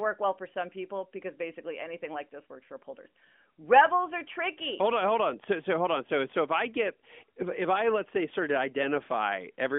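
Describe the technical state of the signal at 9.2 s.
At 9.2 s the audio is intact, carrying only the steady telephone-band character of the AMR narrowband mobile codec path it runs through.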